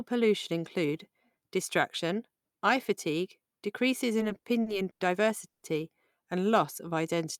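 From 4.19 to 5.03 s the speech hits repeated stalls, a stutter. Packets kept turning up late, so the jitter buffer drained six times, the longest gap about 100 ms. The receiver stretched the last sound to cover roughly a quarter of that stretch, so nothing's lost, but it drags and hiccups.

At 5.48 s there's a short call audio freeze lasting until 5.65 s. The last sound hangs on briefly, then the final 80 ms goes silent, 140 ms in all, before the speech picks up where it left off. The likely cause is packets held up in transit, which pushed the playback delay out by 140 ms.

Between 6.52 and 7.26 s a jitter buffer slow-down kicks in. To rebuild its reserve, the receiver repeated tiny pitch periods and slices of pause, adding 46 ms. The speech plays at about 95% speed with the pitch unchanged, so it sounds slightly drawn out.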